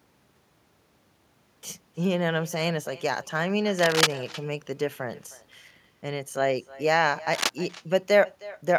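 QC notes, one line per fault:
Throughout: echo with no canceller. Each phrase comes back about a third of a second later, about 19 dB down and thin, since the far-end speaker is leaking into their mic.
3.79–4.15 s and 7.33–7.52 s: cable scratch noise. Rough, uneven scratching bursts, roughly as loud as the speech, likely from a worn cable or connector being moved.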